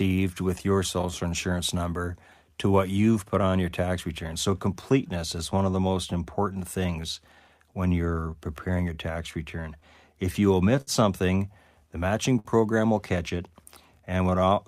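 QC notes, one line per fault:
Throughout: clock drift between sender and receiver. The sender's audio clock runs slow, by around five percent, so fewer samples arrive than the receiver plays out and its jitter buffer keeps draining. The receiver must keep stretching the audio to avoid running dry, which is why small timing hiccups turn up across the whole speech clip at irregular spacing rather than at any steady rhythm.
0.09–14.56 s: repeated timing corrections. To stay level with the slow sender, the receiver repeatedly repeats short pieces of audio, all in the same lengthening direction, adding roughly half a second over the span and leaving the speech playing at about 97% speed. Each insertion is small and unevenly placed, so it comes across as a slightly dragging, unsteady pace with occasional faint stutters rather than an obvious glitch.
0.58–7.07 s and 9.80–12.48 s: scattered short gaps. 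Isolated packets went missing or arrived too late, and the receiver covered each hole by extending the preceding sound. The first stretch has about seven tiny patches, none much beyond 10 ms. The second has about three, the longest around 50 ms, covering roughly a twentieth of that span.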